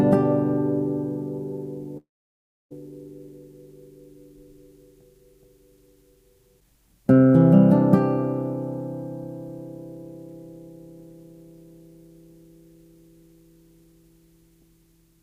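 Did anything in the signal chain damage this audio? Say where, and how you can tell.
Yes. A long network dropout runs from 1.97 s to 2.72 s. The sound stops being real audio for about 0.74 s. The receiver briefly stretches the last sound into a fading buzz or hiss, then leaves roughly 0.65 s of silence before the audio resumes, with the missing stretch simply gone. That pattern points to the network stage: packets likely stopped arriving, and the decoder's concealment kept filling the gap until it gave up.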